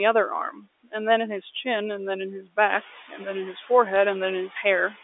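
A noise suppressor running across the whole speech clip is pulling down whatever it judges to be steady background by about 11 dB, frame by frame, so the room noise drops away in the pauses and swells back under each phrase. It is especially noticeable after the room noise climbs about 10 dB near 2.5 s. Twice the same suppressor mistakes speech for noise and turns it down with the background. The first time is between 0.51 and 0.94 s, where roughly 150 ms of sound is cut. The second is from 3.08 to 3.2 s, about 100 ms. At its deepest the gain falls about 17 dB, so soft consonants and word endings in those stretches come out swallowed and faint rather than clipped outright. Separately, the G.711 A-law telephone link, whose coding otherwise passes its usual narrow 300 Hz to 3.6 kHz band, suffers bit errors on the digital phone line at 3.96 s. A brief cluster of flipped bits, at a very low error rate, corrupts individual samples. 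Where a sign or high-order bit is hit, the sample jumps sharply, and that is heard as a crisp tick of crackle laid over the speech at that point.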